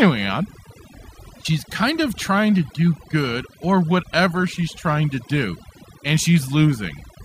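Overdone noise removal runs through this speech clip from start to finish. A noise reduction stage applied far too aggressively pulls individual frequency bands down or out entirely whenever their level sits near its noise estimate, and the softer components of the voice fall below that line and vanish with the noise. Between phrases the background drops and breaks up into twinkling specks.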